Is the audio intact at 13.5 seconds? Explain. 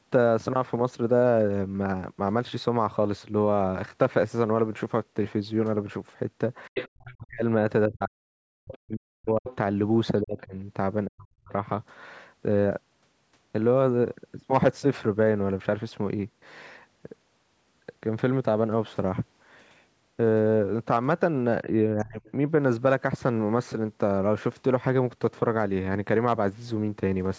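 Yes, the speech is intact at 13.5 seconds, with nothing there beyond the normal band limit of the call microphone processing, which leaves no content above 8 kHz.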